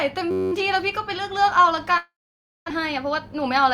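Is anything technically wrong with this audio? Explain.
Yes, three faults are audible in this speech clip.

From 0.31 to 0.52 s a system hang loop occurs. The system stalled while the audio hardware kept replaying one 10.67 ms stretch of its ring buffer, which fits a 512-sample buffer. That piece repeats 20 times, producing a steady buzz at 93.8 Hz, with essentially no speech lost.

From 1.97 to 2.72 s there is a long network dropout, likely packets that never arrived. The receiver extended the last sound as a fading buzz or hiss, then about 550 ms of silence follows. The speech resumes with roughly 600 ms missing.

From 2.80 to 3.64 s a jitter buffer speed-up follows. After the dropout the buffer held excess audio, so the receiver trimmed tiny pitch-period slices repeatedly, about 50 ms in total. The speech plays at 105% speed at unchanged pitch and sounds slightly hurried.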